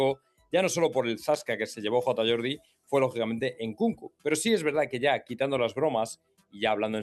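A noise suppressor made for speech has been left running on non-speech audio that came through a call path, where Opus at 40 kbps limits the top end to about 12 kHz. The suppressor treats held tones, ambience and decays as noise, so the level swings by something like 10 dB as sustained material sinks and onsets come through. That gives the pumping, thinning character heard across the whole clip. A compressor would instead follow loudness and duck everything evenly. This one singles out the steady, noise-like parts of the sound.

In four places the suppressor cuts the sound much harder than elsewhere: 0.15 to 0.53 s with a drop of about 18 dB, 2.58 to 2.92 s at about 18 dB, 3.96 to 4.25 s at about 21 dB, and 6.16 to 6.56 s at about 21 dB. Each lasts roughly 0.3 to 0.4 s. Tails and sustained portions collapse while attacks survive. This differs from a dropout or gap, where the signal vanishes outright regardless of its shape.

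From 1.34 to 1.48 s there is a burst of loose connector crackle. A dirty or worn contact makes and breaks rapidly, so the signal is chopped into irregular scratching. Unlike codec packet loss, which gives clean gaps or smeared concealment, this is raw, uneven crackle.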